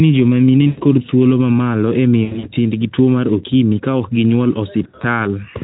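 VoIP packet loss concealed by the speech codec occurs three times. From 0.67 to 0.83 s, after "joma mine", about 100 ms of audio went missing and the Speex decoder (lightly coded, around 15 kbps) filled the gap by extrapolating its last pitch and filter. From 2.24 to 2.49 s, after "thuolo ma malo e", 140 ms was lost in scattered runs up to 80 ms. From 4.84 to 5.05 s, after "okimi ka ok ginyuol", 100 ms went in runs up to 60 ms. Each gap sounds like a stretched tone or coloured noise that fades, with weak, distorted speech lingering afterward.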